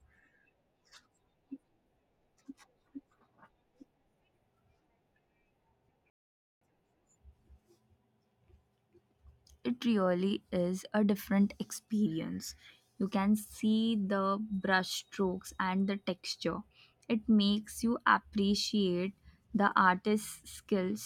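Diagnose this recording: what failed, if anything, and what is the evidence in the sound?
A rebuffering stall at the playback stage: at 6.10 s the speech cuts cleanly to silence and picks up again at 6.61 s, adding about half a second (514 ms) to the clip. The player drained its downloaded audio and simply waited for more to arrive over the network before continuing. What separates this from a packet-loss dropout is that the speech resumes exactly where it halted, with no syllable skipped and no concealment smear. Time is inserted, not audio removed.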